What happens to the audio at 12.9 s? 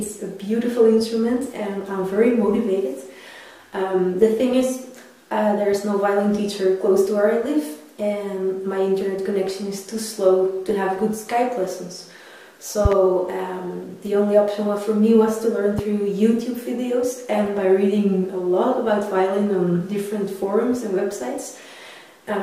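A loud pop, a double thump from 12.85 to 12.95 s, well above the sound, likely a voltage pulse; unlike a dropout, the audio continues underneath.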